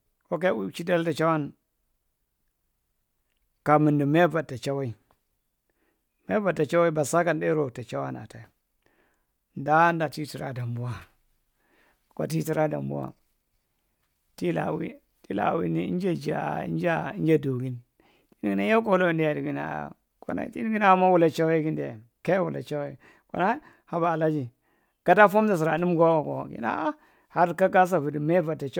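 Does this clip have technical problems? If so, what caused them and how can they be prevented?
No, the speech signal shows no technical faults anywhere in the recording, so there is nothing to trace or prevent.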